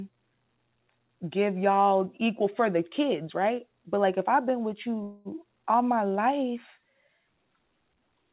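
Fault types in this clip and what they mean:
Call audio freeze: from 5.03 to 5.28 s, between "if I've been with" and "all my life", the sound stretches into a fading buzz or hiss for about 0.22 s, likely because packets stalled and the jitter buffer ran dry. Speech then resumes intact, just delayed.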